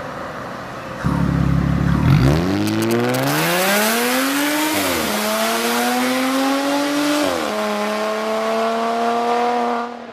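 From 2.67 s to 3.78 s, GSM signalling bursts break through: a galloping dit-dit-dit of short 217 Hz buzzes, about 5 dB below the sound. A nearby 2G phone exchanging signalling bursts is being rectified by the audio circuitry into audible interference.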